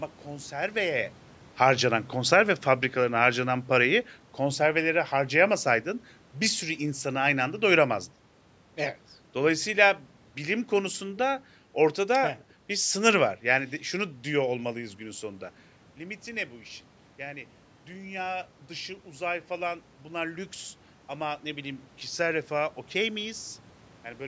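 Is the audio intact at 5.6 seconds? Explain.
No. At 5.6 s the automatic gain is falling. From 3.82 to 7.98 s, after "harcanan konserve fabrikalarına harcanan", the gain control reads the input as too loud or its background noise as too strong and eases down about 3 dB, so speech and background sink together. The waveform envelope tapers, and the spectrogram dims evenly.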